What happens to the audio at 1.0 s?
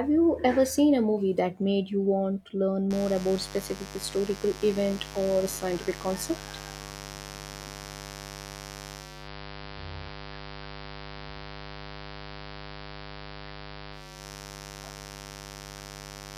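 Nothing goes wrong at 1.0 s: the speech carries on intact through that moment, with no dropout, click, glitch or other fault to be heard.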